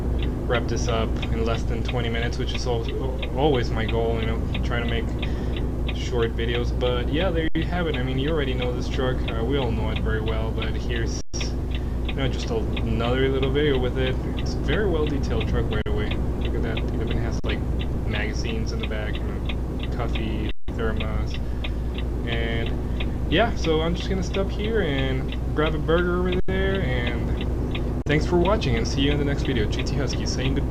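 Seven brief freezes, where the sound locks onto one unchanging level and then carries on from the same point with little or no click, at 7.48 s (73 ms), 11.21 s (128 ms), 15.82 s (43 ms), 17.40 s (43 ms), 20.51 s (171 ms), 26.40 s (85 ms) and 28.02 s (43 ms). Each is an underrun with held sample: the output buffer emptied and the converter held its last value until data returned. The gap lengths from 11.21 s on fit whole multiples of a 2048-sample buffer.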